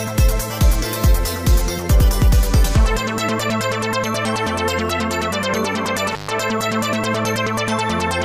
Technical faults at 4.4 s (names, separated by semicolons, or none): none